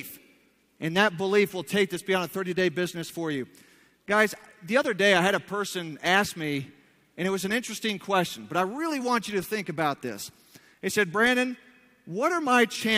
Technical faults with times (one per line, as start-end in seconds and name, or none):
none